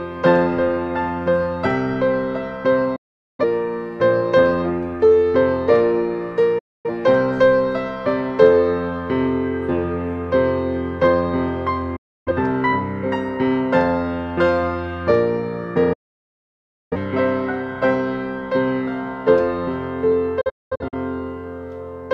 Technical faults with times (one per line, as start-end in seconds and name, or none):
2.96-3.44 digital broadcast dropout
6.58-6.90 digital broadcast dropout
11.96-12.32 digital broadcast dropout
15.93-16.96 digital broadcast dropout
20.41-20.94 digital broadcast dropout